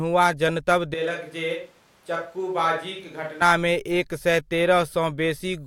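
A switch to a distant microphone runs from 0.94 s to 3.41 s, beginning just before "एक सए". The speech abruptly turns roomy and hollow, loses bass, drops roughly 10 dB, and room noise rises to about 30 dB below it, likely because the close microphone's signal dropped out.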